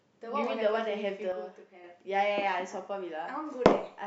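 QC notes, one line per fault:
1.32–1.84 s, sudden gain jump: speech and background noise drop together by about 6 dB in one step and recover, likely from an unramped digital gain change.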